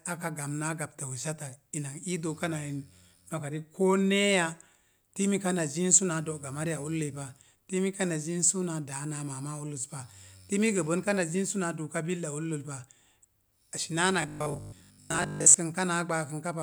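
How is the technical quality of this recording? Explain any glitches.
There's one real glitch, near the end. From 14.22 to 15.58 s the speech turns into a rigid, metallic robotic sound from repeated short buffers, with a steady 50 Hz buzz. It's likely a starved audio stream, where a 20 ms chunk keeps replaying over most of that stretch while fresh audio is dropped, so the words only roughly survive.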